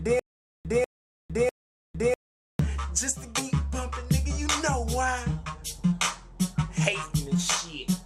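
From the first moment to 2.59 s the clip has a stutter with silent gaps. The pattern is already under way when the clip begins: a 194 ms fragment plays, then 455 ms of digital silence, repeating every 648 ms, three times. The likely cause is a stalled stream replaying its last fragment at each retry, with the intervening audio lost.

At 3.37 to 3.39 s the audio skips ahead. Roughly 0.4 s of material is dropped, probably discarded while later audio was already buffered, and nothing fills the hole. The two sides are spliced almost directly, so the sound jumps abruptly forward.

From 6.41 to 7.35 s a jitter buffer speed-up trims accumulated delay. The receiver removes many short, pitch-period-sized pieces, about 50 ms in total, so the audio runs at 105% speed with unchanged pitch and sounds slightly hurried.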